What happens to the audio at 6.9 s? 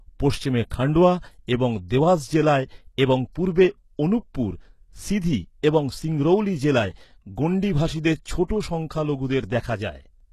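At 6.9 s the speech sounds the way it does across the whole clip: the top end is bright but false, with s sounds coming out gritty, metallic and lispy, and nothing at all above about 12.3 kHz. The likely cause is HE-AAC compression at a very low bitrate, around 16 kbps. The coder keeps only the lower spectrum and rebuilds the treble by copying lower bands upward, so those harmonics never line up with the real ones.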